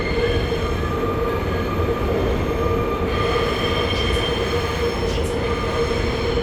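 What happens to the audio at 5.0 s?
Nothing goes wrong at 5.0 s; the sound plays through that moment intact, with no dropout, click or distortion.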